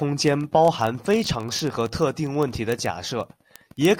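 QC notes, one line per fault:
0.11–3.99 s, word clock ticks: receiver's unlocked clock drifts roughly 700 ppm from the sender, slipping one sample about every 30 ms, producing a steady run of clicks over the speech.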